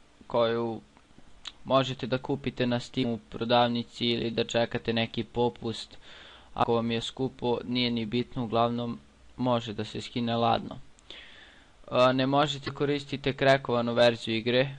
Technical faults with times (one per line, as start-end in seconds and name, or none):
3.02-3.05 broken MP3 bit reservoir
6.62-6.65 broken MP3 bit reservoir
12.66-12.69 broken MP3 bit reservoir